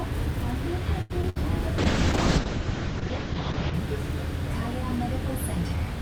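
A recording of everyday sounds carried over a call link, with two distinct faults. From 1.01 to 1.38 s there is repeated packet loss, giving a robotic sound. Four gaps land in quick succession, the longest about 84 ms. Each hole is bridged by stretching out the sound just before it, so close to half of that stretch is synthetic fill. Part of the material is simply gone. This stuttering, patched quality is what sets it apart from a plain dropout, which would leave clean silence instead of a smeared continuation. From 1.79 to 3.80 s a call bitrate drop takes over. The encoder rate falls from 64 to 7 kbps and stays at the bottom for about 1.9 s, and the audio bandwidth shrinks from 20 kHz to 8 kHz. What separates this from a simple low-pass filter is the coarse, watery, swirling grain that comes with the muffling. A filter would only dull the top end and leave the rest of the texture clean.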